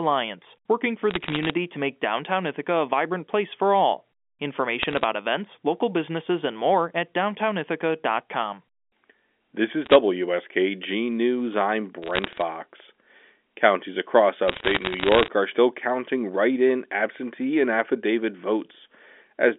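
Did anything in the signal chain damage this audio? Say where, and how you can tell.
Yes. There are bit errors on the digital phone line in the transmission stage, at 1.11–1.54, 4.82–5.04, 9.85–9.95, 12.02–12.42 and 14.48–15.28 s. Flipped bits corrupt single G.711 samples, which is heard as crackle. On the waveform these show as lone spikes, and on the spectrogram as thin vertical broadband lines.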